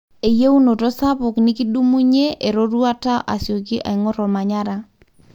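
Nothing in this recording stands out as a technical fault; it just runs along without any glitch or interruption to point to.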